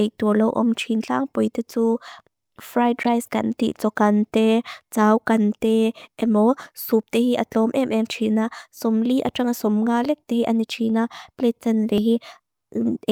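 At 3.03 s the decoder plays a compressed frame whose bits have been flipped, and the corruption spreads across about two frames, ending at 3.06 s. Misread gains and codes put energy at the wrong frequencies, producing a short, sharp chirp of noise lasting around 30 ms. It is loud, peaking near -10 dBFS.

At 11.98 s the speech skips abruptly: roughly 50 ms of sound vanishes and the two sides butt together with no gap. The likely cause is audio missing between chunks, where the recorder drops a sliver while closing one 5-second chunk and opening the next. The join falls right on that chunk boundary.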